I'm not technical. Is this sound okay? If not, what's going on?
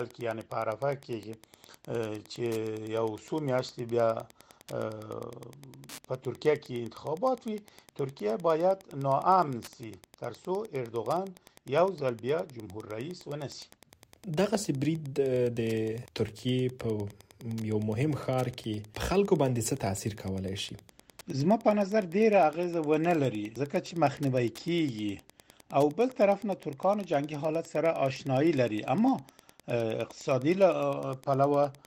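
No. From start to finish there's a faint, steady ticking in the background, about ten ticks every second, sitting quietly underneath the sound. This is Wi-Fi interference. A wireless router or device was close to the audio equipment, and it sends out a short signal roughly every tenth of a second. The audio electronics picked up that radio signal and turned it into an audible click, over and over, at that same regular pace.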